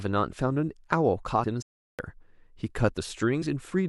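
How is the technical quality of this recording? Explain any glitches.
The speech has three glitches: two short skips where compressed frames were lost, and one silent stall.

At 1.43 s and again at 3.41 s, compressed frames are skipped. Whole blocks of the encoded audio never reach the output. The frames here are 21.3 ms long. The first skip drops about three frames, roughly 70 ms of speech. The second drops about two, roughly 40 ms. The speech simply lurches forward.

From 1.62 s to 1.99 s there is a playback stall. The sound cuts out in mid-flow for about 0.37 s, then carries on. The likely cause is the player running short of data, or its thread being held up, so nothing reached the output until it recovered.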